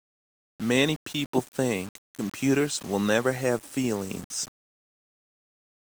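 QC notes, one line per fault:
Throughout: low bit depth without dither. The speech is quantised to about 6 bits by rounding, leaving an error only about 25 dB below the signal. The grit tracks the voice. Quiet passages turn harsh or sputter toward silence. Likely rounding without added dither.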